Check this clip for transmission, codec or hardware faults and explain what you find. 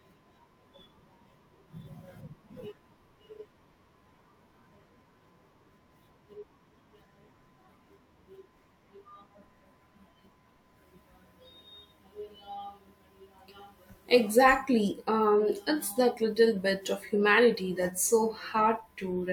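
One codec fault appears: compressed frames skipped at 3.41 to 3.45 s. The decoder drops whole frames, so about a tenth of a second vanishes, consistent with two 43 ms frames. The speech jumps ahead at the join.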